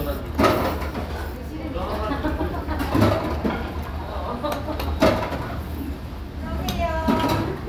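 Nothing goes wrong here; the sound runs along without a single technical hiccup worth pointing out.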